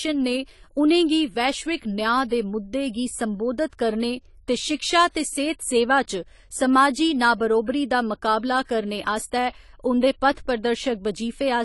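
Throughout, the speech sounds dull and smeared, with nothing above 11.5 kHz and a warbling, fizzy edge. This is likely low-bitrate AAC compression.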